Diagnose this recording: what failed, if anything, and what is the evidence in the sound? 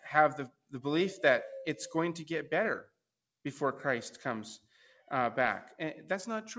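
The noise suppressor in the call processing is what bit here. It cut real sound twice, from 0.49 to 0.73 s and again from 2.83 to 2.99 s, each time for a fraction of a second, with the level dropping by as much as about 21 dB. The suppressor misread real sound as background noise and pulled it down hard. The top end stops at 8 kHz, which is just the normal band limit of a G.722 call path.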